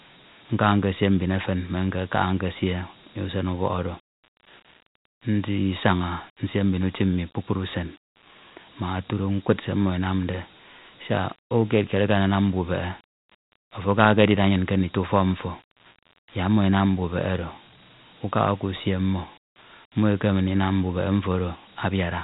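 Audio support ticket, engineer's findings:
Dialogic VOX ADPCM throughout, speech: plainly audible gritty hiss tracking the voice, nothing above 3.8 kHz. Coarse 4-bit step quantisation, bandwidth fitting 8 kHz sampling at 32 kbps.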